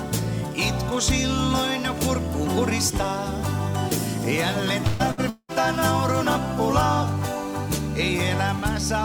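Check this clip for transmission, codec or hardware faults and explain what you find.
Three network faults fall close together in the middle of the clip. There are two bursts of packet loss and a longer gap.

The first burst of packet loss runs from 4.87 to 5.02 s. The second runs from 5.11 to 5.20 s. In each, a short run of packets never arrived in time. The receiver stretched the last sound to cover about 120 ms, then about 60 ms, fading it as it went. You hear a brief held buzz or hiss, then a jump ahead.

From 5.29 to 5.52 s the sound holds and decays for nearly 0.2 s. Then about 50 ms of silence follows before the audio resumes. Roughly 180 ms of material is simply gone. This is likely a long network dropout. No packets arrived for that stretch, so concealment ran out and left a quiet hole.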